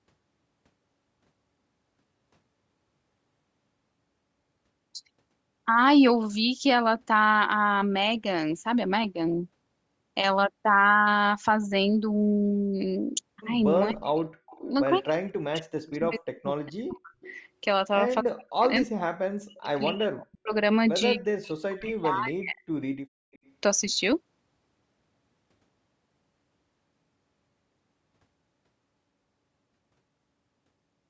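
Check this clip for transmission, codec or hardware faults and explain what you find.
Two echo-cancellation faults appear in the middle of the speech.

Speech suppressed in double talk, 13.91–17.17 s, 18.22–20.52 s and 21.15–22.64 s: the speech dips by up to about 40 dB and breaks up, likely because the echo canceller clamped down while both sides talked.

Echo leak, 14.47–14.61 s, 15.86 s, 17.21–17.39 s, 19.58–20.26 s and 23.33–23.51 s: faint copies about 25 to 35 dB down, delayed 247 ms then 278 ms, likely loudspeaker echo the canceller missed.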